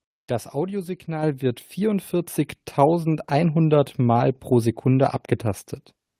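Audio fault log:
1.23 s, microphone volume stepped up: the input gain on the device was raised by about 6 dB in a single step, so the speech and the background noise floor jump louder together. On a waveform the envelope widens abruptly; a spectrogram brightens evenly across all frequencies at once.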